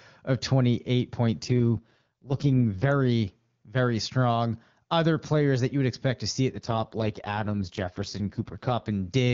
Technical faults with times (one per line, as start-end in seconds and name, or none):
1.43-2.92 AMR rate drop
6.50-8.91 AMR rate drop